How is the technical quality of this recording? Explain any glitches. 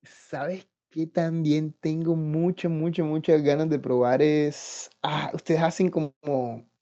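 The recording has one clear glitch: a microphone volume step-up at 1.11 s. The call software judged the microphone input too quiet and raised the device's input volume in a single jump of about 6 dB rather than easing it up gradually. Because the change happens at the microphone itself, the speech and the background noise behind it both get louder at the same instant. The result is an abrupt lift in overall level, with the room noise audibly stepping up alongside the voice.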